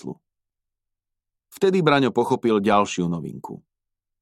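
No technical faults can be heard anywhere in this clip.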